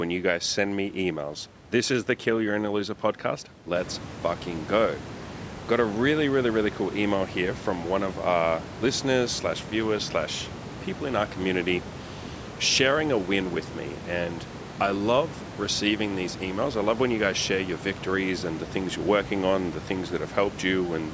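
No technical faults can be heard in this speech recording.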